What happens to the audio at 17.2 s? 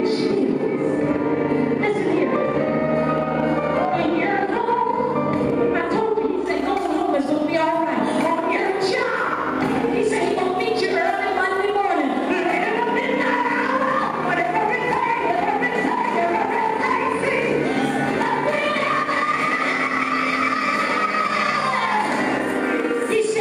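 Gain pumping runs through the whole clip, including 17.2 s: the level ducks and recovers by about 5 dB, flattening the waveform envelope, likely from over-high gain hitting a fast limiter.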